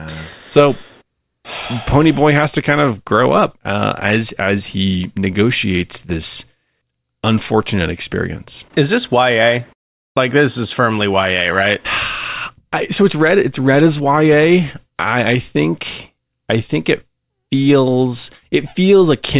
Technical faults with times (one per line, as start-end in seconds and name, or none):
none